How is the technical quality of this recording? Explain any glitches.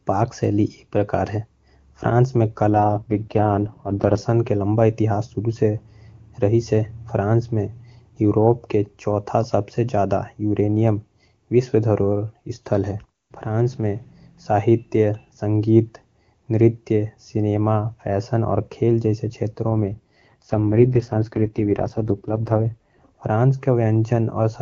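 The recording shows two AMR rate drops over a wideband AMR link whose normal high-rate coding is clear, with at most faint codec damage. From 2.72 to 4.18 s and from 19.70 to 23.02 s, the link falls to a low codec rate, consistent with roughly 23.85 down to 6.6 kbit/s, to protect against errors. The bandwidth holds and nothing drops out, but the speech turns rough and synthetic until the rate recovers.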